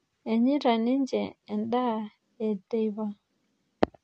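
Throughout, the speech is dull, with nothing above 10.4 kHz and a smeared, warbling texture. This is likely AAC compression, consistent with roughly 32 kbps.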